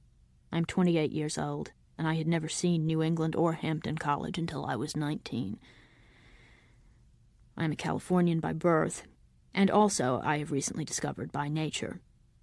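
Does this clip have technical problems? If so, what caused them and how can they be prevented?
No, there are no technical problems to report in this clip. Nothing in the recording calls for a cause to trace or a fix to apply.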